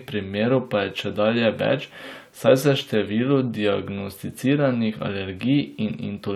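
No technical faults are audible.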